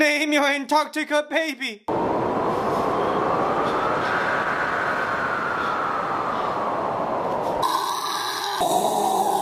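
At 4.01 to 4.03 s there is a skip ahead. About a second of audio never reaches playback, either lost in transit or discarded when the jitter buffer overflowed while later audio was already queued. The receiver jumps straight to the newer material with no fill, so the two sides butt together almost directly. The result is an abrupt discontinuity where the sound suddenly resumes somewhere further along, and the end-to-end delay drops by roughly that same second.

From 4.39 to 5.47 s the jitter buffer speed-up follows. Playback runs at 123% of normal rate while the receiver repeatedly cuts out short segments one or a few pitch periods long, trimming about a third of a second in total. Because whole periods are removed rather than the signal being resampled, pitch stays unchanged while the audio moves noticeably faster, giving this roughly one-second stretch a compressed, hurried character before normal pacing returns.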